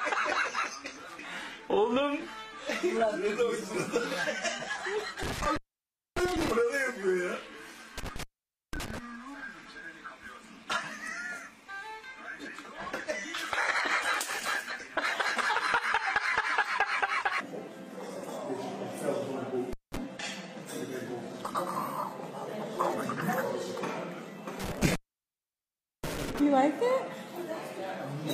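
The sound drops out with crackle at the edges around 5.23–6.51 s, 7.98–8.98 s, 19.73–19.97 s and 24.60–26.40 s: an intermittent contact, a loose connection opening for about 0.59, 0.50, 0.19 and 1.08 s.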